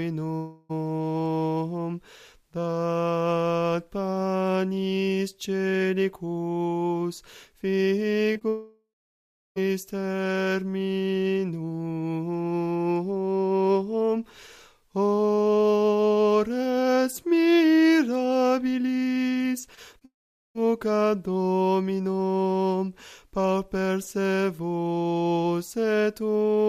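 From 0.35 to 0.71 s the sound turns into a fading buzz that covers the whole gap, with no silence at all, before the audio resumes with a piece missing. This is likely a long network dropout: about 0.34 s of audio never arrived, and the receiver stretched the last sound to fill the hole.

At 8.33 to 8.37 s and again at 8.39 to 8.43 s there are brief smears, each a couple of hundredths of a second long. These are short concealed packet loss: about 20 ms went missing each time, and the receiver patched it by continuing the previous sound.

Right after that, from 8.49 to 9.58 s, the sound trails off into a fading continuation and then about 0.7 s of silence. This is likely another long network dropout. Roughly 1.08 s was lost and never played back.

From 19.66 to 20.05 s the sound turns choppy. This is repeated packet loss: four gaps, the longest 19 ms, each patched by continuing the last sound. 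About 13% of the stretch is filled in this way.

At 20.05 s what is likely a further long network dropout follows without a break and runs to 20.67 s. A short fading tail gives way to about 0.43 s of silence, with half a second of audio missing.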